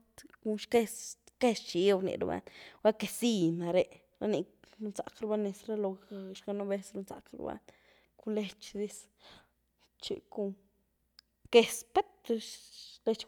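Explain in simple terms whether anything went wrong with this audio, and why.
Nothing went wrong here.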